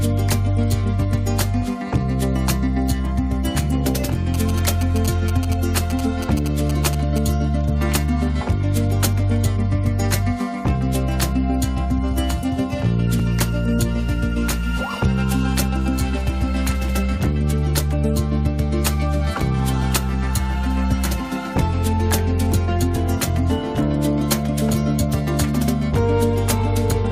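From 4.34 to 7.18 s the audio carries GSM signalling bursts: a galloping dit-dit-dit of short buzzes at 217 Hz, roughly 10 dB below the wanted signal. A nearby 2G phone exchanging control traffic is sending radio bursts that the audio circuitry rectifies into audible interference. At 13.19 s a gap between stream segments cuts a hard-edged hole of 4.2 ms of silence into the sound. Two segments' timestamps leave a small gap that the player fills with silence, so nothing is lost; the stream uses 4-second segments.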